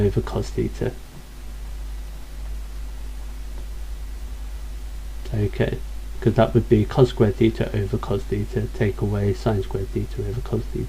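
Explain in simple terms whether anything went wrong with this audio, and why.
No faults can be heard.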